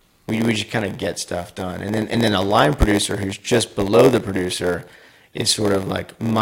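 From the start to the end, a steady buzz at about 86.1 Hz runs under the speech. It comes from a block size mismatch (padded). One stage hands over shorter blocks than the next stage reads. The reader's block fits a 512-sample buffer, and the missing tail of each block is filled with zeros. That short silent gap repeats once per block, which makes the buzz. The gaps also stretch time, so the speech runs at 0.938 times normal speed. Its timbre stays the same.

At 2.14 s, just after "stuff done and then", there is a brief blip from damaged data in a compressed stream. Some of the coded data there was wrong. The decoder misread those frames, lost sync and hunted for the next valid frame header. That produces the blip. The speech then resumes with "then a line producer".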